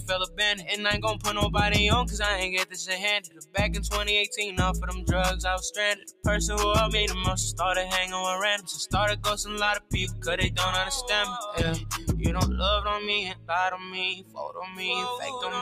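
A noise suppressor built for speech is running on this non-speech audio throughout. It treats sustained and ambient parts of the sound as noise, so the level swings by around 10 dB as steady tones and tails are pulled down while onsets pass. A compressor reacts to loudness, but this tracks steadiness, which is why it pumps and thins unevenly. The sound is cut by the noise suppressor at 0.26–0.69 s (about 10 dB), 3.2–3.56 s and 5.95–6.26 s (about 17 dB each), and 13.33–13.5 s, 13.77–13.95 s and 14.15–14.39 s (about 10, 7 and 15 dB). Each time a held or decaying sound sinks or its tail is clipped short, not a sudden gap as from a gate or dropout.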